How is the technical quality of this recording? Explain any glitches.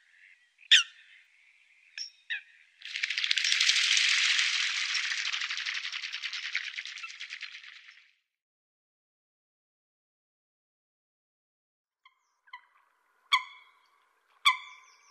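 The recording has one clear glitch, a drift correction step. From 5.21 to 6.81 s the audio drops to 5.45% slower and about 97 cents flat, roughly a semitone, then snaps back to normal pitch and pace. The likely cause is clock-matching software changing the playback rate in a single jump to rebalance its buffer. Unlike tape wow or flutter, which wanders gradually, this shift starts and stops abruptly and holds steady for those 1.6 seconds.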